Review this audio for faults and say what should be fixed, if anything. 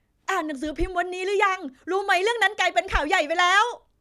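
No faults detected in this speech recording; nothing needs fixing.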